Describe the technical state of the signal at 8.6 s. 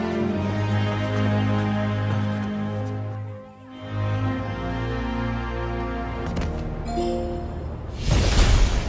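At 8.6 s the signal is in a wrong sample rate fault running from 6.27 s to the end of the clip. The samples are clocked out at only two-thirds of the rate they were captured at, with no conversion, which fits 24 kHz material played at 16 kHz. Everything stretches to 0.667 times normal speed and drops about 7 semitones together, so the sound here is low, slowed and dragged, with a darker tone.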